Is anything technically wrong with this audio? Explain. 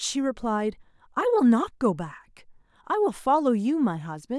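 No, nothing technically wrong can be heard in this speech clip. No moment stands out as a technical problem anywhere in it.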